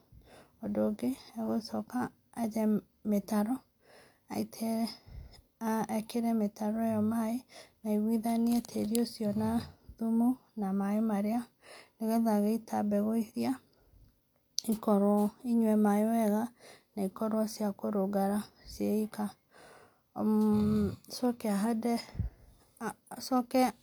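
No technical faults are audible.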